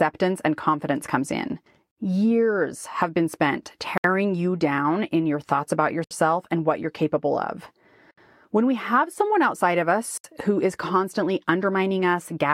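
This speech clip has short dropouts of about 67 ms every 2.0 s, at 1.91 s (after "and confidence comes in"), 3.98, 6.04, 8.11 and 10.18 s, each a gap at a join of encoded pieces. Separately encoded segments were joined with their encoder start delay and final-frame padding left in.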